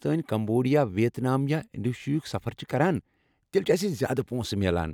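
Speech, with nothing technically wrong to report at any point.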